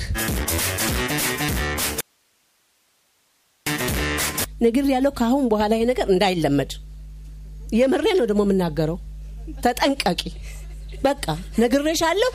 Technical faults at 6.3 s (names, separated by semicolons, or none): none